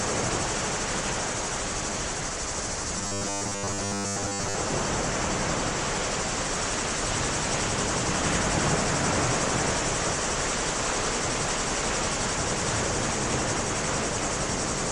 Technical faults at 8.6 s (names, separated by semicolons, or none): none